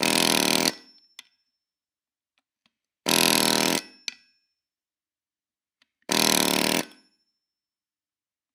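No technical faults occur in this audio, so there is nothing to describe in time order.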